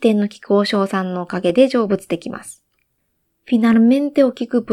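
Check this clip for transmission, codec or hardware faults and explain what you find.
The clip has one fault: clock drift buffer slips. Right after "の菊和", at 0.75 s, a short click appears. It repeats every 0.75 s until 4.48 s, about seven times in all. Each click is brief and sharp and lands at a steady rhythm over the speech. The likely cause is two devices running on separate clocks that differ by roughly 200 ppm. The buffer between them slowly drifts until a few samples are dropped or repeated. That small jump causes each click.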